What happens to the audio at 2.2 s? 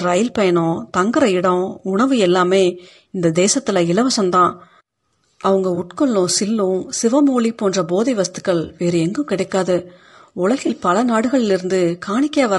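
At 2.2 s the speech carries the same plainly audible coding damage heard across the whole clip, most likely from low-delay AAC compression of the AAC-ELD kind used for calls. Its short frames resolve the pitch harmonics poorly, and at a rate that fits roughly 32 kbps there are too few bits to fill them. The result is a rough, grainy texture, with noise in the gaps between harmonics and a thin, synthetic-sounding upper band.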